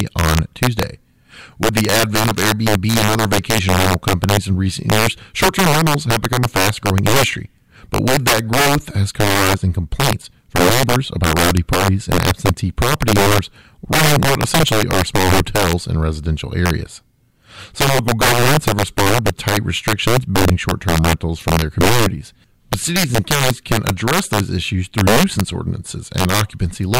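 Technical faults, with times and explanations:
Throughout, integer overflow: the speech was driven about 6 dB past the integer ceiling, and instead of being limited, samples that crossed it wrapped to the opposite sign. Only a few percent of samples exceed the limit, but each one jumps across the full range, so loud syllables break into violent cracks far harsher than clipping.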